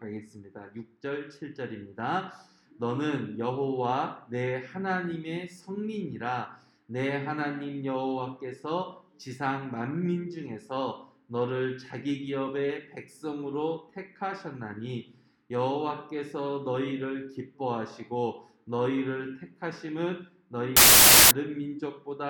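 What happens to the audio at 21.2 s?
A burst of loud, harsh broadband noise covers the audio from 20.77 to 21.31 s: samples built from the wrong bytes, with low-order bits misread as the large part of each sample value.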